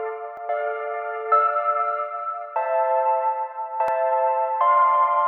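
At 0.37 s and 3.88 s the sound skips ahead by roughly 10 ms and 20 ms, likely dropped buffers (overrun), with samples overwritten before being read.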